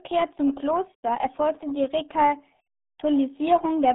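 Throughout, RealAudio 14.4 codec damage makes the speech muffled and gargly, consistent with an 8 kbit/s coder, with nothing above 3.8 kHz. Unlike plain telephone band-limiting, it also has a heavy, bubbling coding texture.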